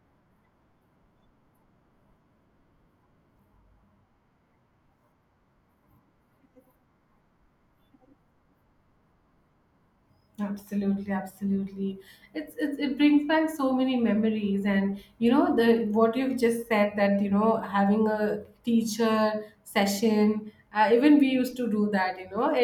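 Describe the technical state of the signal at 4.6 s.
At 4.6 s the speech signal is intact, with no dropout, distortion, clipping or other fault audible at that moment.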